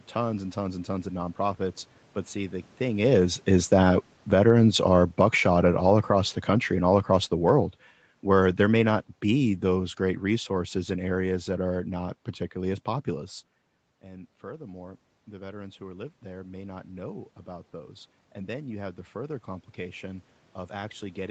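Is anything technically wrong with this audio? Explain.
Yes. The automatic gain control is audibly reworking the level during the clip, which is speech carried over an Opus call path with nothing above 8 kHz.

Automatic gain falling occurs from 2.83 to 7.64 s and again from 8.19 to 11.82 s. Around 3 s the talker comes closer and the level jumps. The gain control judges the input too loud and slowly pulls its gain down, by about 10 dB over the first stretch and about 5 dB more over the second. Speech and room noise sink together, so the level keeps dropping well after the talker has settled.

Automatic gain rising runs from 14.0 s to the end. After the talker moves away around 13 s, the input is about 17 dB quieter. The gain control slowly raises its gain to compensate. Over several seconds the voice and the room noise swell up together. The background rises along with the voice, which shows that the change comes from the gain stage rather than from the talker.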